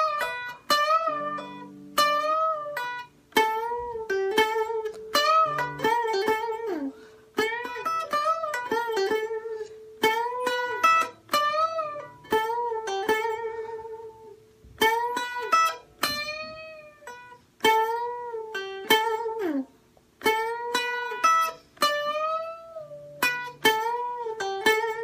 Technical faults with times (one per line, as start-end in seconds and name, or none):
none